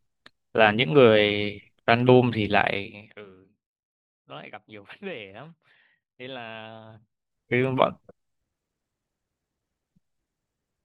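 Nothing in this speech recording stands out as a technical problem; it just runs along without anything going wrong.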